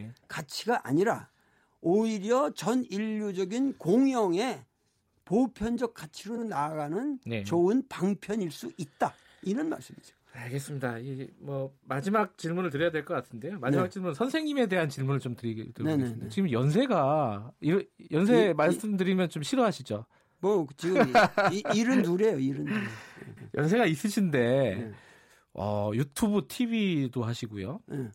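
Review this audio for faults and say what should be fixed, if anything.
A short run of compressed frames was delivered twice, so the decoder replays the same slice of speech and the clip runs longer by that amount. This repeated-frames fault is heard as a stutter at 6.36 s, where a 70 ms block plays again, and at 23.36 s, where a 139 ms block repeats, pointing to runs of roughly three and six frames. Deduplicating frames by sequence number or timestamp before decoding would prevent this.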